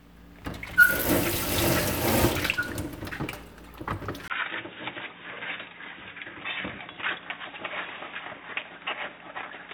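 At 4.28 s, after a brief gap of about 20 ms, the sound turns dull and slightly quieter, with nothing above 3.8 kHz and faint new background noise, likely an input switched to a poorer device.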